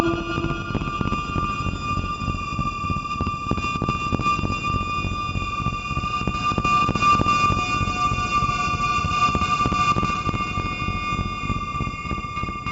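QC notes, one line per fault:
No fault to log.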